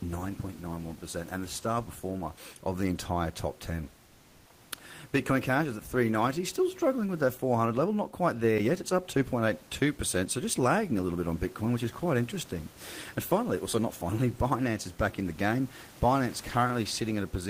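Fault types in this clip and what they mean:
Comfort noise in place of the background: from 4.05 to 4.49 s the room's background turns into a steady, featureless hiss about 2 dB quieter, likely discontinuous transmission filling a pause with synthetic noise.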